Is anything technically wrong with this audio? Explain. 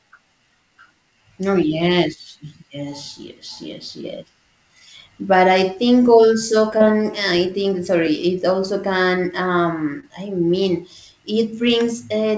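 Yes. Short concealed packet loss at 6.78–6.82 s, just after "I think also", and 10.00–10.09 s: about 20 ms of audio arrived too late and was replaced by an extension of the preceding sound, heard as a brief smear or wobble.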